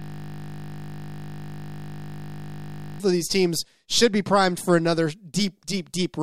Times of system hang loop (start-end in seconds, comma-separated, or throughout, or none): 0.00-3.00